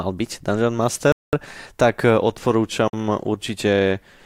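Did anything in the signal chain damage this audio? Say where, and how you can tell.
Yes. Bluetooth stall at 1.12 to 1.33 s and 2.88 to 2.93 s: the speech cuts to silence for 209 ms, then 52 ms. The stage is the wireless playback link, with interference likely holding back packets until the headphone buffer ran dry.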